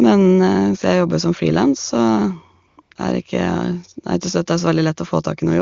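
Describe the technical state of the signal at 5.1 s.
At 5.1 s the speech is intact, carried cleanly through the AMR wideband (HD Voice) codec at 23.85 kbit/s with no fault audible at that moment.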